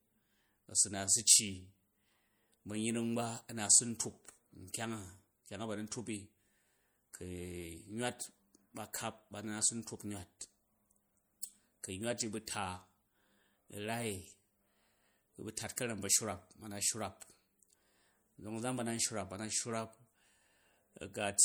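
MP3 compression runs through the whole recording, and its damage is plainly audible. The encoder keeps dropping weak frequency lines as bits run short, so the speech takes on a watery, swirling quality with smeared consonants, which fits a 64 kbps stream. Nothing remains above 21.1 kHz.

Pre-echo appears at 11.41 s, spread over about 18 ms. A sharp attack fell late in a transform block, so quantisation noise sized for the loud onset leaked into the quiet moment before it. This is heard as a brief hiss ahead of a softened attack.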